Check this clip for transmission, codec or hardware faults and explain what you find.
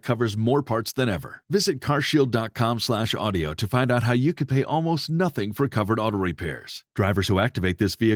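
No transmission or hardware faults found.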